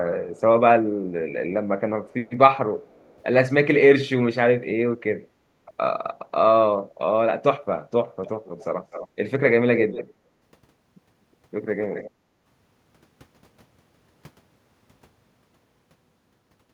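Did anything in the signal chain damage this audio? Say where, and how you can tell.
Yes, at the call-processing stage: echo leak at 2.09–2.13, 2.86–3.22, 8.25–8.29, 8.45–8.65, 8.91–9.08, 9.75–10.14 and 11.84–12.11 s. A delayed copy of the speech trails the original by 0.30 s in the first two events and 0.25 s afterwards. It grows from very faint, about 40 dB down, to about 10 dB below the speech by 9.75 s. The likely cause is a far-end loudspeaker whose echo canceller let part of the microphone pickup through. A discrete, fixed-delay repeat like this points to leaked echo rather than room reverberation, which decays smoothly.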